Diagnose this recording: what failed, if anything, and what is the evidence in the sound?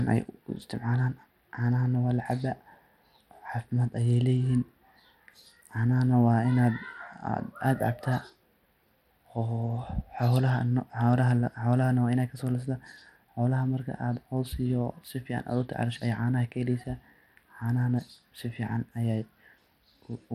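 Channel delay (comb filtering) runs through the whole clip, at the sample-alignment or buffer stage before a mono sum. The upper range of the speech sounds thin and phasey, with a fixed notch around 7 kHz. A first notch that high means a tiny offset, a fraction of a tenth of a millisecond, which fits one channel lagging by a handful of samples. Summing cancels whatever both channels share at that frequency.

The second fault is at the codec stage, likely Bluetooth SBC compression. It is plainly audible from start to finish as a gritty, granular layer on the speech and a treble that flickers rather than holding steady. The spectrum stops dead at 18.8 kHz. That pattern points to a modest bit pool: the weaker high sub-bands get too few bits and drop in and out, while the coarse quantisation of the remaining bands leaves noise and aliasing on the signal.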